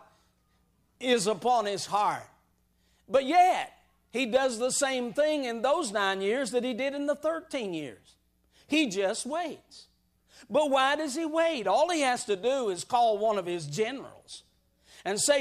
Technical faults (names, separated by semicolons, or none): none